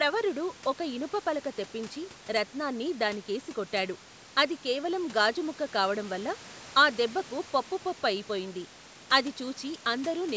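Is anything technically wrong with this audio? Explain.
No, nothing's wrong here: this is speech that went through a call's microphone processing, which trims the deepest bass and leaves nothing above 8 kHz, and that's just how a call normally sounds.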